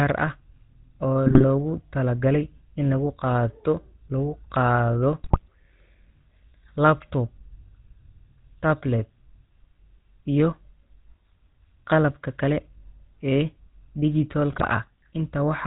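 GSM full-rate codec coding runs through the whole speech clip. The vocal tract is modelled and excited by sparse, regularly spaced pulses, with nothing kept above 4 kHz, so the audio is dull and plainly buzzy and gravelly throughout, consistent with a 13 kbps GSM full-rate stream.

GSM bit errors break in at 1.26–1.45 s, 5.24–5.48 s and 14.50–14.66 s. Corrupted filter, pitch and gain values reach the decoder, twisting the spectrum and jolting the level frame by frame, so each stretch collapses into squawks, pops and gargling. The damage points to a few percent of bits flipped.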